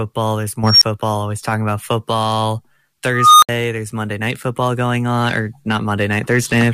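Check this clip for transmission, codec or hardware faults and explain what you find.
Two bursts of unstable filter break into the speech. From 0.64 to 0.83 s, just before "always talking about football", a squeal near 5 kHz swells over about 180 ms, clips, then drops into a 15 ms gap. From 3.13 to 3.49 s, just after "always talking about football", a tone around 1.5 kHz grows for about 290 ms before a 65 ms silence. A recursive filter with bad coefficients feeds its output back and grows without limit until the numbers overflow and the sound cuts out. Acoustic feedback howl rises more slowly and doesn't end in abrupt silence.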